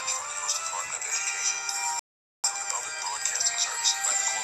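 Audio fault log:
1.99–2.44 s, rebuffering stall: the sound drops to silence for about 0.45 s, then picks up at exactly the point where it stopped. The player used up its downloaded audio and had to wait for more data before it could continue. Because playback resumes from the same position, nothing is skipped or repeated, but the gap adds 445 ms to the clip's running time.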